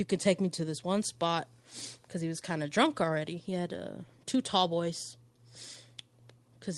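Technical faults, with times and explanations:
No technical faults found; the speech has gone through a normal Opus call path, and its top end stops at about 12 kHz, as expected for that codec's bandwidth.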